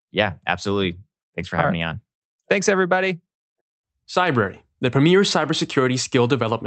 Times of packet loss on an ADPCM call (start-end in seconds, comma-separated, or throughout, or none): none